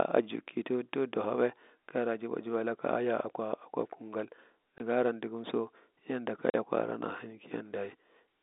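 At 4.78 to 4.80 s and again at 6.50 to 6.54 s, the speech drops out abruptly: packet loss filled with silence. The first gap is 20 ms and the second 40 ms, which fits one and then two lost 20 ms packets replaced by silence. On the waveform, each gap is a dead-flat line with sheer edges. On the spectrogram, each is a blank vertical stripe across the whole 250 Hz to 3.7 kHz telephone band.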